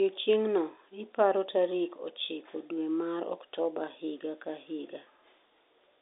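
Telephone-band speech with no audible technical faults.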